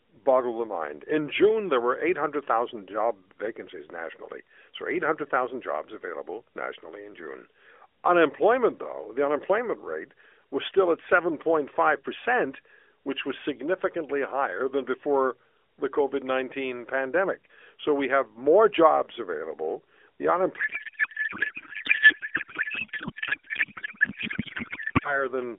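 From 20.6 s to 25.3 s the speech collapses into a codec payload misread. The AMR frames were packed octet-aligned but decoded as bandwidth-efficient, so every field lands a few bits off and the decoder synthesises nonsense. The result is garbled, warbling noise that barely tracks the talker. On a spectrogram the orderly harmonic bands give way to smeared, patchy energy, still capped near 4 kHz. Before the fault, the narrowband AMR path sounds lightly coded, which fits a 12.2 kbps mode.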